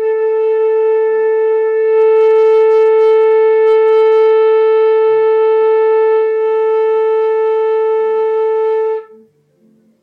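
From 1.68 to 6.48 s, digital radio blending to analogue AM: a 333 ms cross-fade dulls the treble, adds faint hiss, and shifts level about 2 dB, then fades back rather than cutting.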